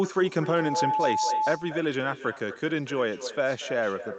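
It's a short speech recording that came through a call path, where the top end stops around 8 kHz, which fits an Opus stream at a modest bitrate. The real problem runs the whole way through: echo with no canceller. Every phrase is trailed, roughly a fifth of a second later, by a thinner copy sitting about 12 dB down. That's the far end playing the call over a loudspeaker, its mic catching it, and nothing cancelling that return before it comes back.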